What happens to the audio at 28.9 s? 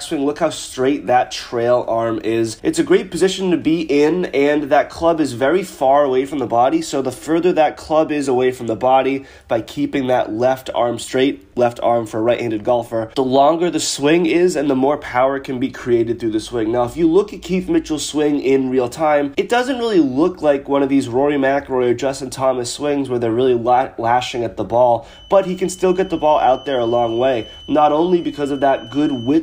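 At 28.9 s a feedback whistle is sounding, running from 25.02 s to the end of the clip: a thin, steady 3 kHz tone sitting well below the main sound and swelling and fading slowly in level. The likely cause is a loudspeaker-to-microphone loop held just at the feedback point, so unlike a runaway howl it never builds, and unlike a fixed electrical tone it wavers.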